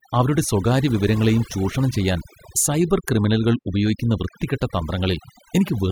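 Overdone noise removal runs through the whole clip. A noise reduction stage set far too aggressively has pulled individual frequency bands down, or cut them out entirely, whenever they came close to its noise estimate. The softer parts of the speech fell under that threshold and were stripped along with the noise. Between phrases the background drops, broken by small twinkling specks where isolated bands flicker back in.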